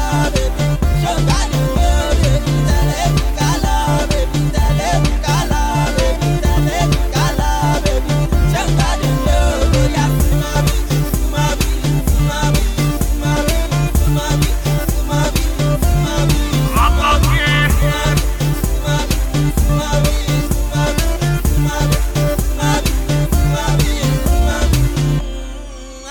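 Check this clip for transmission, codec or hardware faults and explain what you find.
Nothing to flag: no transmission, codec or hardware fault is audible anywhere in the clip.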